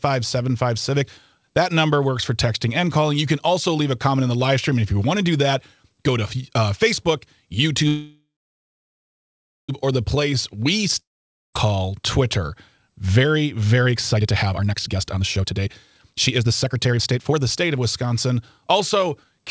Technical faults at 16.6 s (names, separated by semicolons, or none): jitter buffer speed-up